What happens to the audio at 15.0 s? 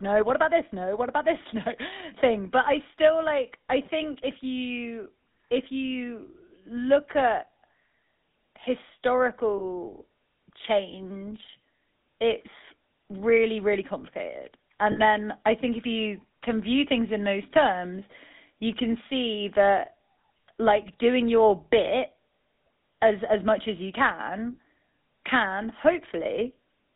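From 14.92 to 15.00 s, just after "it's really really complicated" and before "then i think if", there is a burst of lost GSM frames lasting about 40 ms, which fits two 20 ms frames going missing. The decoder fills the gap by repeating the last good frame's settings, so the sound holds briefly as a rough, metallic ring. A plain dropout would leave silence instead. This loss is too short to fade fully, so the ring runs straight into the next words. Throughout the clip, the GSM full-rate codec adds a buzzy, gravelly roughness and limits the band to about 200 Hz to 3.7 kHz.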